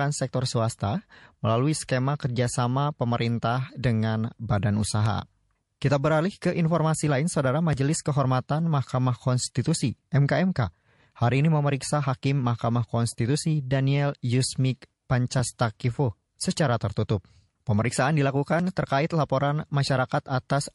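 Speech runs the whole way through with a watery, swirly texture and a hard treble ceiling, likely MP3 compression at a low bitrate, around 48 kbps. A spectrogram would show a flat cutoff and flickering holes.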